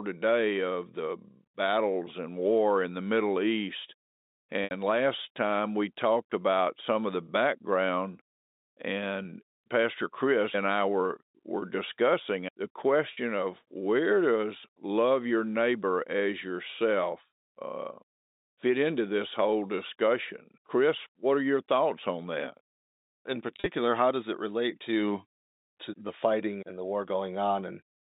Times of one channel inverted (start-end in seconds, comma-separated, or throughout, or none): none